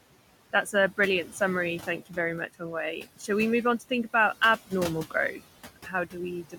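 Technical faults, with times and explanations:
Throughout, noise suppressor artifacts: the room noise is pulled down by about 17 dB frame by frame; the spectrogram shows a speckled, flickering noise floor.
5.32–5.42 s and 5.76–6.16 s, speech cut by the noise suppressor: speech mistaken for noise drops by about 11 dB, then about 16 dB, sounding swallowed; waveform envelope sags, and spectrogram energy thins.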